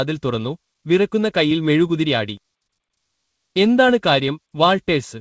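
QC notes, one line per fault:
No faults to note.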